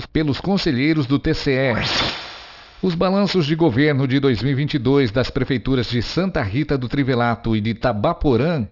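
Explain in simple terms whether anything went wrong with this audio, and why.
Aliasing runs through the whole clip: the audio was resampled down without filtering first, so sound above 6 kHz folds back as gritty, metallic false tones.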